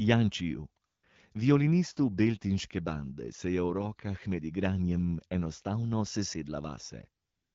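A short speech clip over what sounds like an HD Voice call, with the light AMR-WB codec colouring you'd expect at around 12.65 kbit/s. The fault is AMR comfort noise in two spots: from 0.85 to 1.03 s, and again from 7.23 s to the end at 7.54 s. The phone decided the talker had gone quiet and stopped sending speech frames, so the receiver swapped the real background for smooth synthetic noise that switches in and out.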